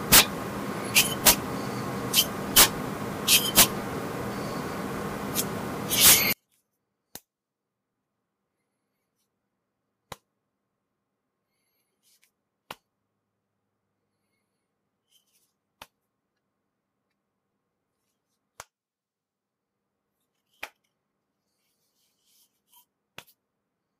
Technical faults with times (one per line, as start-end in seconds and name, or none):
0.00-6.33 samples built from the wrong bytes